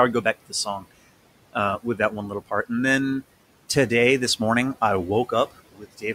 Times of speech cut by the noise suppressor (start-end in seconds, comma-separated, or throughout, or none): 0.49-0.92, 5.72-6.04